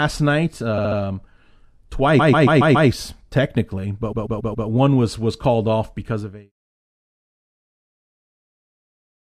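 At 0.77 to 0.98 s, 2.18 to 2.88 s and 4.11 to 4.67 s, right before "one was was called", you get repeated frames. The same short chunk of compressed audio gets decoded again and again, about 70 ms at first and then about 139 ms, so the speech stutters. Each spot also pads the clip out, by 0.21 s, 0.70 s and 0.56 s. The fade-out from around 6 s to 6.52 s is smooth.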